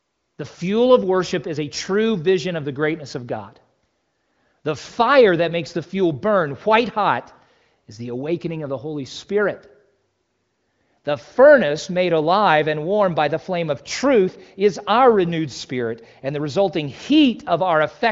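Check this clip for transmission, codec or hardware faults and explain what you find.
No transmission, codec or hardware faults are audible here.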